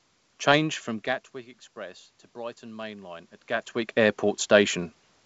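A short speech recording with one fault: automatic gain rising. From 1.73 to 4.81 s, the input falls by about 19 dB. The gain control slowly lifts its gain by about 4 dB. Voice and room noise swell together over those three seconds.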